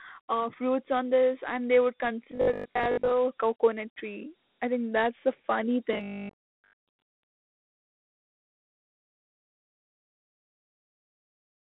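A speech clip with Dialogic VOX ADPCM damage throughout. The sound is squeezed into a phone-line band of about 200 Hz to 3.6 kHz, with nothing above 4 kHz. Each sample is coded as a small 4-bit step, and the coarse steps leave a plainly audible gritty hiss trailing the speech. The grain fits a 4-bit coder at 8,000 samples a second, about 32 kbps.

Two stretches, 2.31 to 3.11 s and 5.93 to 7.19 s, turn into robotic sound from repeated short buffers. The voice becomes a stiff metallic buzz at 50 Hz that still loosely tracks the speech. A 50 Hz buzz matches a 20 ms chunk replayed over and over. The likely cause is audio arriving too late, so the player loops the last buffer. Most of each stretch is repeats, and the real audio underneath is lost.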